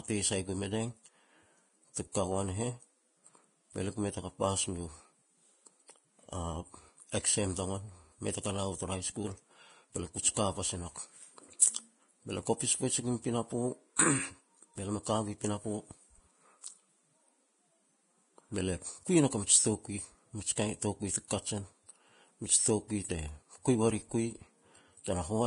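Throughout the speech, the treble is coarse and grainy, with a hiss-like texture where fine high-frequency detail should be, and nothing is present above 10.6 kHz. This points to heavy Vorbis compression as the likely cause. At such a low setting, consistent with a bitrate in the region of 28 kbps, the encoder cuts off the top band and quantises the remaining treble so crudely that detail is replaced by noise of similar energy.

Pre-echo appears at 2.12 to 2.14 s, spreading about 24 ms, and again at 13.96 to 13.99 s, spreading about 30 ms. In each case, a short burst of hiss arrives just ahead of a sharp onset, and the attack itself sounds softened and smeared. The transform block containing the onset spreads its quantisation noise across its full length, so noise scaled for the loud attack spills into the quiet moment before it.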